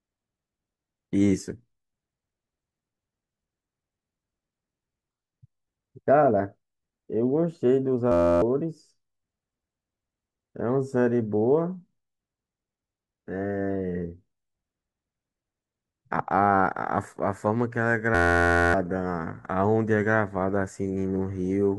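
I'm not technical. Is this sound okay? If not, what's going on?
No. Twice the speech freezes into a steady buzz: from 8.12 to 8.42 s, and again from 18.15 to 18.74 s. This is a system hang loop. The computer stalled while the sound hardware kept replaying the same tiny 11.6 ms slice, about 86 times a second, which fits a 512-sample buffer. Unlike a plain dropout, which goes silent, this loop fills the gap with a humming tone, and roughly a third of a second, then most of a second, of speech is lost.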